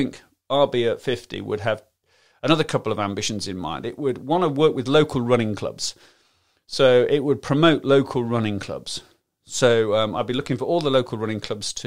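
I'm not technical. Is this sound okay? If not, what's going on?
Yes, nothing in this speech recording points to a technical problem with how it was captured or delivered.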